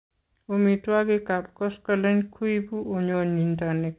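A short concealed packet loss hits this speech clip from 3.12 to 3.15 s, just after "koskoleny kuibu": about 20 ms of audio failed to reach the decoder in time, and the receiver papered over the gap by extending the preceding sound for roughly 14 ms before easing back into the real signal. The result is a brief smeared wobble where that instant should be, within a band that stops at 4 kHz, consistent with a G.711 mu-law call path.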